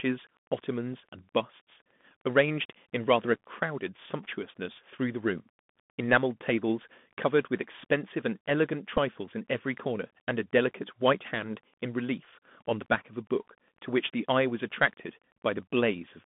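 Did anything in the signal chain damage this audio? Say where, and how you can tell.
Yes. Throughout the clip the speech sounds narrow and boxy, with nothing above about 3.5 kHz and little below 150 Hz. S sounds are scratchy, loud bright syllables distort, and a granular hiss sits under the voice. This is a Bluetooth CVSD headset codec at the codec stage. Its one-bit up/down encoding with an adapting step can't keep pace with fast, loud high-frequency movement. The damage is plainly audible, and the sound fits CVSD at 64 kbps.

At 8.97 s there is a brief tick lasting roughly 16 ms. This is a Bluetooth headset packet repeated, a fault on the wireless link between headset and phone. Voice packets failed to arrive, and the chip re-decoded the previous packet's bits instead of leaving a gap. Each repeated packet spans 3.75 ms. About 7.5 ms of audio was replaced, which fits two lost packets.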